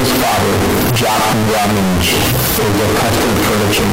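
Throughout the speech, the signal is a harsh, near-square wall at an almost fixed, high level, with noise as loud as the talker; float read as integer, likely 32-bit float samples decoded as 32-bit integers.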